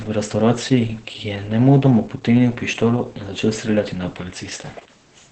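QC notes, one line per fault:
throughout: Opus voice compression. The sound is muffled, hoarse and slightly robotic, typical of the SILK linear-prediction coder running in wideband at a bitrate that points to around 10 kbps. Content above about 8.7 kHz is cut away, so a spectrogram shows a hard, flat ceiling there with nothing above it. Below it, the excitation is coded coarsely, giving smeared, blotchy harmonics and grainy noise between them. The waveform looks smoothed.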